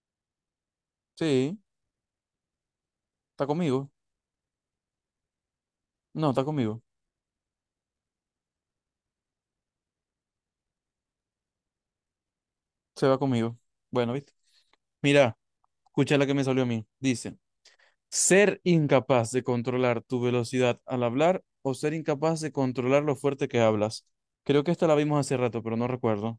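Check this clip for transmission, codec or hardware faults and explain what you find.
No faults are audible anywhere in the speech.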